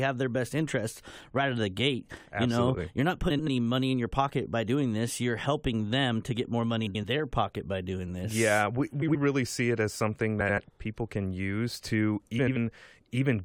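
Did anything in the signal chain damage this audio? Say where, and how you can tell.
Yes. A faint, evenly spaced ticking runs from 0.29 s to 13.40 s, one tick roughly every 0.3 s, about fifty in all. That regularity points to the clock slip clicks of a converter stage, most likely two free-running clocks differing by around 70 ppm, each slip adding or removing one sample.

Three isolated sharp clicks sit at 2.54 s, 5.93 s and 11.31 s, each a thin vertical line in the spectrum. These are dropped samples, a fraction of a millisecond of waveform lost, likely in a driver or buffer hand-off. Their irregular, sparse spacing separates them from the steady slip ticks.

Five short garbled flutters in the speech, at 3.30–3.48 s, 6.86–7.05 s, 9.02–9.15 s, 10.40–10.59 s and 12.39–12.57 s, come from frames out of order on the network or codec side. Within each stretch, two neighbouring blocks play swapped. 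The blocks are 85.3 ms long, except 64 ms at 9.02 s, which fits frames of about 21 ms. Unlike a dropout, no time goes missing.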